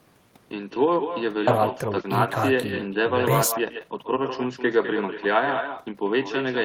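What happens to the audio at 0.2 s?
At 0.2 s the speech is already shadowed by an echo with no canceller, present throughout: the far end's loudspeaker feeds its microphone and the sound returns around 200 ms later, about 8 dB quieter and thinner. On a spectrogram, each burst has a fainter duplicate shifted right.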